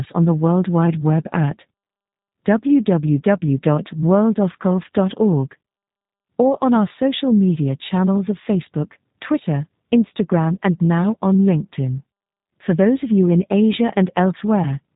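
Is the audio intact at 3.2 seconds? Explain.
No. At 3.2 seconds, as across the whole clip, the speech carries G.729 codec damage. The sound is rebuilt from a short-term vocal tract filter, a pitch predictor and a sparse set of fixed pulses per frame rather than coded as a waveform, which fits an 8 kbit/s stream. Nothing passes above 3.8 kHz, so the speech sounds band-limited, and the coarse excitation gives it a plainly audible rough, synthetic edge.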